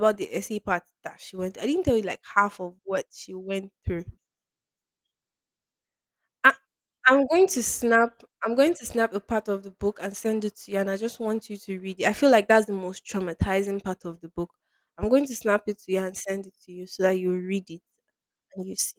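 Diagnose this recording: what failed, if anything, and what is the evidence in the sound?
Nothing stood out on listening: the speech comes through Opus voice compression at what sounds like about 24 kbps with its full band intact, and no stage of the chain draws attention to itself.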